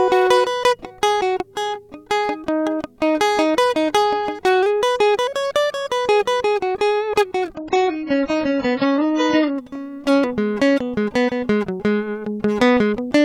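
At 7.55 s the music drops abruptly in quality with no gap, a sign of an adaptive stream at a lower bitrate: the player switched to a cheaper rendition, likely because throughput fell. Until 9.55 s nothing is present above about 7.5 kHz, so the treble vanishes, and coding artefacts thicken. The degradation points to a fall from roughly 96 kbit/s AAC to around 12 kbit/s. The wider bandwidth returns just as suddenly at 9.55 s.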